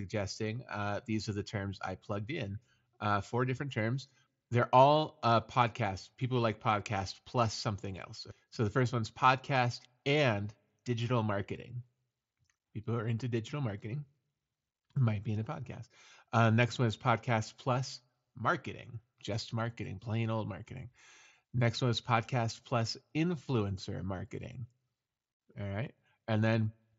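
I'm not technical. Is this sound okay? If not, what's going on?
Yes, this speech clip sounds fine, with nothing going wrong anywhere, just the ordinary sound of a Bluetooth headset doing its normal job.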